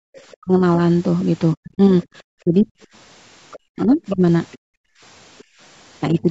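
The clip opens with background gated by the echo canceller: from 0.00 to 0.11 s the room tone is pulled down by about 37 dB, a short hole in the noise floor where the canceller clamped the microphone while the loudspeaker was active, and the ambience snaps back after roughly a tenth of a second.

From 0.18 to 0.37 s a faint trace of the other side's voice leaks through, sitting far below the talker, likely residual loudspeaker echo that the canceller failed to subtract. Immediately after, from 0.39 to 0.62 s, the speech is suppressed in double talk: the talker's level falls by around 40 dB in brief chunks, likely because the canceller mistook the local voice for echo while both sides overlapped.

The longest leak runs from 1.54 to 5.44 s, and here the far-end voice is much more present, only modestly below the talker. Over that stretch the talker is hit twice more by double-talk suppression: from 1.55 to 2.75 s the voice repeatedly cuts out by around 40 dB for about half a second in total, and from 3.72 to 4.22 s it dips by around 30 dB, sounding chopped.

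From 4.58 to 5.59 s the background is gated again, dropping about 38 dB in patches amounting to half a second, so the room sound pumps in and out. A final, lighter double-talk dip of about 10 dB between 6.10 and 6.28 s slightly lowers the talker. The call's microphone processing band-limits everything to below 8 kHz.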